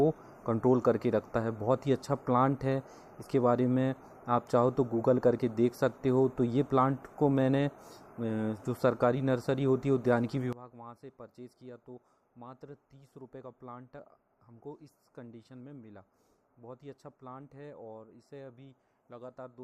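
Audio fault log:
10.53–19.63 s, one channel inverted: from 10.53 s to the end the level falls by about 20 dB and the sound turns faint, likely one stereo channel with reversed polarity cancelling shared content in the mono sum.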